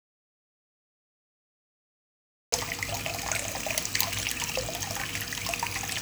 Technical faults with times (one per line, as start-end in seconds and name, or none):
0.00-2.52 audio dropout to silence